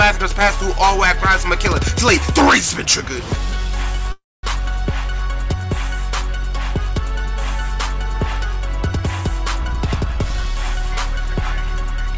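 At 4.12 s the audio halts and the last sound is drawn out as a fading buzz or hiss, then about 220 ms of silence. At 4.45 s it resumes where it stopped. This is likely a call audio freeze: delayed packets emptied the jitter buffer, and the receiver filled 312 ms without dropping anything, adding that much delay.

From 9.61 s to 12.14 s a jitter buffer speed-up plays the audio at 108% speed with pitch unchanged, so it sounds hurried. To shrink its excess delay the buffer cut many short pitch-period pieces, about a fifth of a second in total. Throughout, the G.722 call path leaves nothing above 8 kHz.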